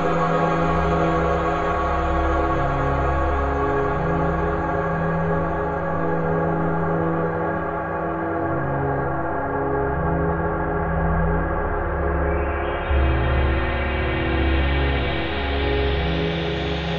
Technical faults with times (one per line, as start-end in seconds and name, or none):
none